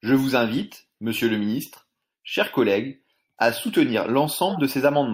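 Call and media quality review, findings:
Corrupt frame decoded, 4.49–4.60 s: brief chirpy noise burst over the speech, about 120 ms, peaking near -15 dBFS. Roughly two damaged compressed frames decoded anyway; misread gains/codes misplace energy. Spectrogram: frame-length block of stray, misplaced energy; waveform: short abrupt burst.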